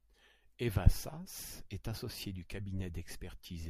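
Nothing in this short speech recording points to a technical fault in the signal chain.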